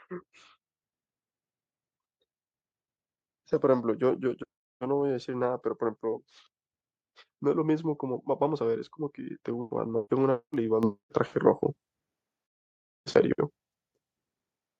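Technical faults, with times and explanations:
10.83 s, microphone volume stepped up: the whole sound, voice and background alike, jumps up by about 8 dB in a single step, as the call software raised the device's input volume at once. The waveform envelope widens abruptly there, and the spectrogram brightens evenly across all frequencies.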